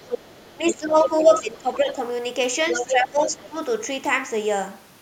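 From 0.0 to 0.73 s a second voice sits behind the speech, roughly 15 dB down. This is the other side's voice leaking through, likely because the echo canceller left loudspeaker sound in the microphone. It adds a separate voice rather than removing anything. From 0.54 to 1.98 s the speech itself dips, by as much as about 15 dB over roughly a second in total. This is speech suppressed in double talk, likely the canceller turning down the talker while both sides spoke. The clue is loss of the main voice, not an added one. Within that stretch, leaked scraps return at 1.05 to 1.09 s, nearly as loud as the speech, and faintly at 1.30 to 1.39 s. Leakage comes back strongly from 2.66 to 2.90 s, and suppression follows from 2.87 to 3.56 s, dipping the voice for about half a second.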